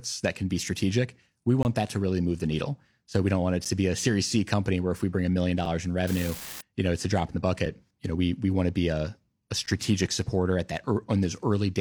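Gaps between stream segments land at 1.63 to 1.65, 3.65, 5.65, 7.66 and 9.66 s, one every 2 s, which fits 2-second segments whose timestamps don't quite meet. The player plugs each gap with silence, so you get hard-edged dropouts of 21, 9, 8, 6 and 10 ms. The one at 3.65 s falls between "we don't want it" and "to be a", and the one at 9.66 s between "to be a a" and "supporter at". Nothing is actually lost, just stretched.

From 6.07 to 6.61 s, right before "you know it's a", there's an unreliable data bit. One bit keeps flipping at random, throwing out spikes of the same size, and you hear a steady crackly fizz laid over the sound.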